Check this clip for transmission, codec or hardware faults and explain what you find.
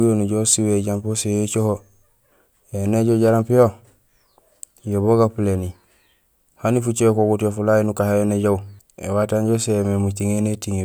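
No faults found in this clip.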